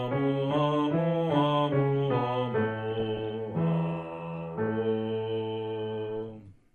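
The audio carries plainly audible MP2 compression throughout: it sounds dull, with a gurgling, granular texture as upper sub-bands drop in and out, which likely points to MPEG Layer II coded at a low rate, fitting around 80 kbps. A spectrogram would show a ragged upper edge with blocks of high-frequency energy blinking on and off, and coarse, stepped detail below. From 2.91 to 3.31 s there is DAB burbling, short blips of noise and level jumps in single sub-bands over the sound. Bit errors at a fraction of a percent slip past the error correction and corrupt the scale factors and samples, so single sub-bands jump in level for up to a frame. On a spectrogram this appears as scattered bright rectangular patches in narrow bands, and the waveform envelope shows brief irregular bumps across those 0.4 seconds.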